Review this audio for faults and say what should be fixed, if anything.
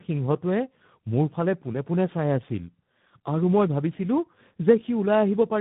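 Tandem speech coding throughout: G.729A, then G.711, then G.726 each re-encode already degraded audio, leaving it rough, muffled and warbly, with nothing above 3.8 kHz. Prevent it by negotiating one codec end to end or passing the original encoding through untouched, so the audio is compressed only once.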